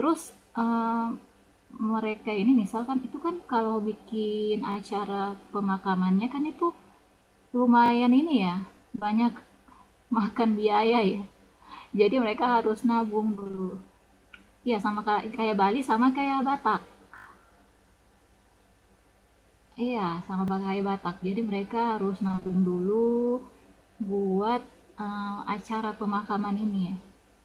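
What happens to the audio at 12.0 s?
At 12.0 s the audio is intact, with no dropout, click, distortion or other fault at that moment.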